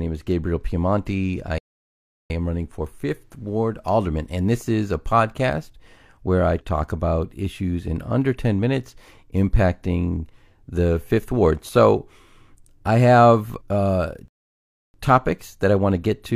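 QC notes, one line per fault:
1.58–2.30 s and 14.28–14.94 s, rebuffering stall: the player ran out of downloaded audio and waited, so the speech drops to silence and resumes exactly where it stopped, adding 0.72 s and 0.66 s.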